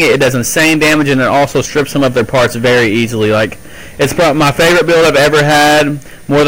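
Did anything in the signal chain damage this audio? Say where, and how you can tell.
Yes: hard clipping all the way through. It's driven about 20 dB too hot into a converter or other stage, so nearly a third of samples hit the rails, giving constant harsh fuzz.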